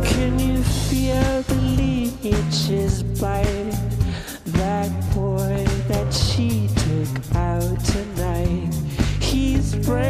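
No audible faults: the signal shows no dropouts, glitches, level jumps or distortion events at any point.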